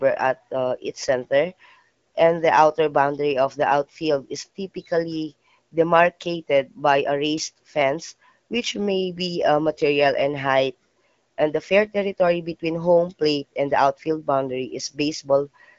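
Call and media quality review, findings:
No faults found in this call and media quality review.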